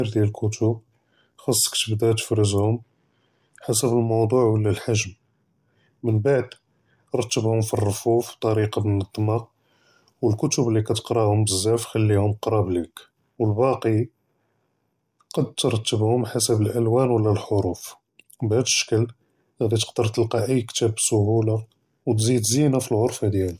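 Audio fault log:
Nothing stood out on listening to the speech in this recording.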